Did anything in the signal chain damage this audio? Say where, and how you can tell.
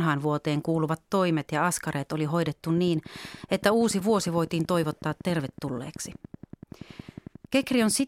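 Yes. From 2.78 s to 8.01 s there's a train of clicks, evenly spaced at 10.7 per second, roughly fifty of them, peaking about as loud as the speech. Near-identical pulses ticking at that steady rate likely mean interference leaking into the analogue wiring or interface.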